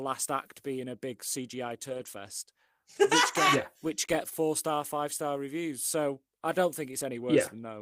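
From 1.89 to 2.07 s the speech turns rough and grainy for about 100 ms. This is a lost packet rebuilt from error correction. Several separate packets went missing, which fits five 20 ms packets. The decoder played the low-bitrate copies carried in the packets that followed. Nothing drops out, but the detail thins and noise creeps in.

The same repair happens briefly at 3.33 to 3.35 s, just before "get yeah which get". One 20 ms stretch sounds coarser.

At 4.29 to 4.33 s comes a short concealed packet loss, between "get yeah which get" and "star five star reviews". About 20 ms of audio never arrived in time. The receiver stretched the last sound to cover the hole, then blended back into the real signal. It comes through as a tiny smear or wobble.

At 6.91 to 6.93 s, right after "I don't", another single 20 ms packet is rebuilt from error correction. It gives a brief rough patch.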